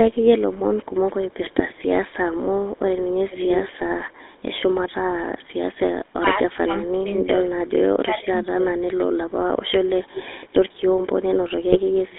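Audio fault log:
throughout GSM full-rate codec: buzzy, gravelly roughness on speech, band limited to about 150 Hz to 3.6 kHz, from pulse-driven vocal-tract modelling that fits 13 kbps GSM.
11.71–11.78 s GSM bit errors: a brief squawk and gargling burst as flipped bits corrupt filter, pitch and gain values, pointing to a few damaged frames.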